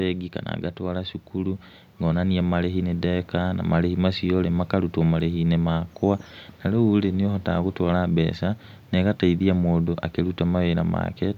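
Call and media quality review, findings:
Speech and background swell together, about 5 dB louder from 0.77 to 3.67 s. Automatic gain rising: AGC judged input too quiet and ramped its gain gradually.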